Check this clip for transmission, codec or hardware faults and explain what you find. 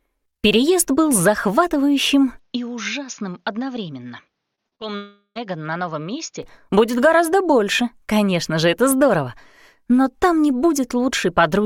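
Three kinds of fault appear: a temporary change of input device, a cluster of short concealed packet losses, and one longer network dropout.

Input switched to a poorer device, from 2.39 to 6.43 s: the recording likely moved to a lesser microphone or headset profile. Nothing above 6.8 kHz gets through, the level falls by roughly 10 dB, and a faint new noise floor sits far below the signal. The sound turns dull, then clears abruptly with no gap.

Short concealed packet loss, at 4.55 to 4.59 s, 4.67 to 4.73 s and 4.75 to 4.82 s: 20 to 40 ms of data each time arrived too late, and the decoder filled each hole by extending the preceding sound. Each appears as a brief smear or wobble.

Long network dropout, from 4.96 to 5.37 s: about 400 ms of audio likely never arrived. The receiver stretched the last sound into a fading buzz or hiss, which ends in a short silence before the audio resumes later, with the missing portion gone.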